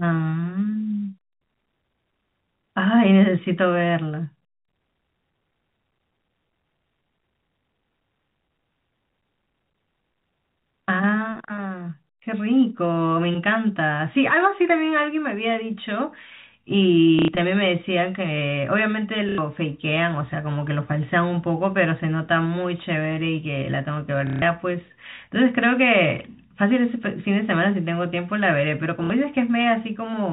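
Speech over a telephone-band line, with nothing above 4 kHz. It has packet loss with the last packet repeated at 17.19–17.28, 19.29–19.38, 24.27–24.42 and 29.04–29.10 s. Each gap, 60 to 150 ms long, is filled by replaying one chunk. That gives a robotic stutter. The repeat spacing fits 30 ms packets, so it buzzes near 33 Hz.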